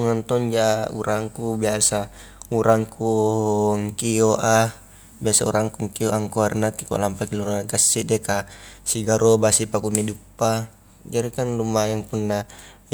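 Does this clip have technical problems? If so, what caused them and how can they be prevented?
No, there are no technical problems to hear in this speech recording. With nothing going wrong, there is no cause to trace and nothing that needs preventing.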